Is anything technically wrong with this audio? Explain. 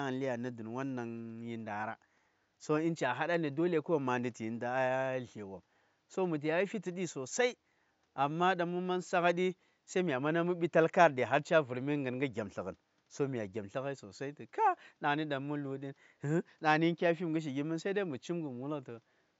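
No, no technical faults here.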